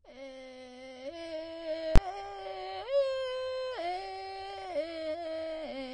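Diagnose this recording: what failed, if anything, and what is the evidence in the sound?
The music throughout carries plainly audible codec damage, and AAC compression is the likely cause. It sounds dull and smeared with a warbling texture on sustained material, and nothing remains above 19 kHz. This points to AAC-LC at a low bitrate, around 32 kbps, quantising the spectrum coarsely.

At 1.96 s a single loud bang marks invalid numbers at full scale. A block of about 20 ms sat flat at one extreme value, far beyond the music's peaks. This is a processing or sample-format conversion fault, where a calculation produced infinite or invalid values that were clamped to the largest representable sample.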